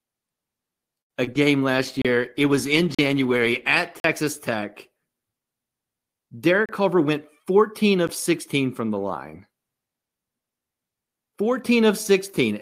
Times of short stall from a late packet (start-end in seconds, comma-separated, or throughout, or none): 1.01-1.12